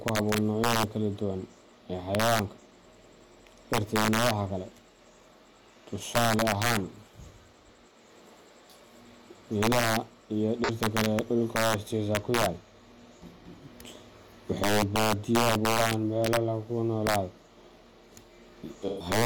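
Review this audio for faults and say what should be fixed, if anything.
Sharp, violent cracks break out on the loudest speech peaks throughout the clip, harsher than ordinary clipping. This is integer overflow. The signal is driven about 7 dB past full scale, and under one percent of samples wrap to the opposite sign instead of being limited. To prevent it, use saturating arithmetic or a limiter before the integer conversion, and leave headroom in the gain stage.

A brief smeared, noisy patch replaces the speech from 10.64 to 10.70 s, and a longer one of 128 ms runs from 18.88 to 19.06 s. This is AAC frame loss with concealment. The decoder lost data, about 43 ms in the first gap, which fits a single frame, and a run likely three frames long in the second. It rebuilt each gap from the last good spectrum. To prevent it, protect the AAC stream against dropped frames with more reliable transport, error correction or retransmission.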